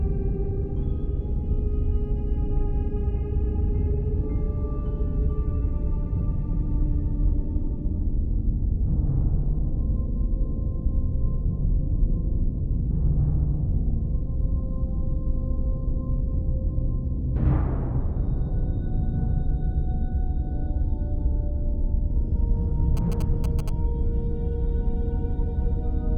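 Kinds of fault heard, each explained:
GSM signalling bursts: a nearby 2G phone's short radio bursts, rectified by the audio circuit, give a galloping dit-dit-dit of short buzzes at about 217 Hz, well below the signal level.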